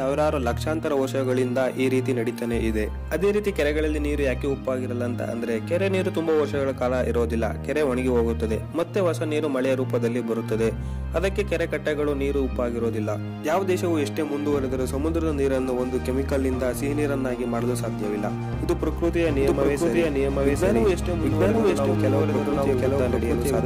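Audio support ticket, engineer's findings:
Doubled audio track from 19.28 s to the end. Second full-band copy trailing by roughly 0.7 s, about as loud as the original, no decay or room colour, cuts in abruptly. Likely a slower capture path also mixed in.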